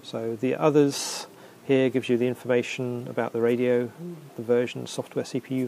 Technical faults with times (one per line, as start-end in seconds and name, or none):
none